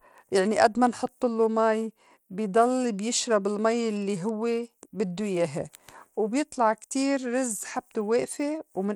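Bluetooth SBC compression runs throughout the speech, likely from an SBC link at a bitrate consistent with about 96 kbps. Too few bits reach its sub-bands, so coarse quantisation leaves a plainly audible grittiness on the sound, with nothing above 20.8 kHz.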